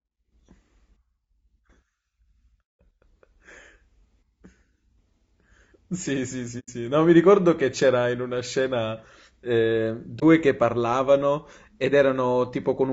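Throughout the speech the voice sounds rough and grainy, with noise filling the gaps between harmonics and a thin, synthetic top band. This is low-delay AAC compression, likely AAC-ELD at a rate around 32 kbps, whose short frames resolve pitch harmonics poorly.

From 6.59 to 6.70 s the sound fades into a soft-edged hole, and from 10.19 to 10.23 s it briefly dips. This is AAC frame loss with muting: the decoder zeroed the missing spectrum. The first gap suggests about three lost frames, the second one.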